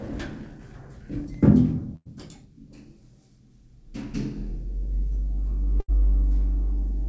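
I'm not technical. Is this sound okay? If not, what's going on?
No. A burst of packet loss occurs twice, at 1.96–2.07 s and 5.80–5.90 s. Roughly a tenth of a second drops out each time, and the receiver fills the gap with a fading stretch of the preceding sound.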